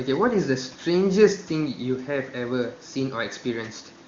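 Nothing goes wrong in this speech clip; the faint room noise sits about 31 dB beneath the talking, and the HD Voice coding sounds like it's running at a high rate, with clear, unstrained speech.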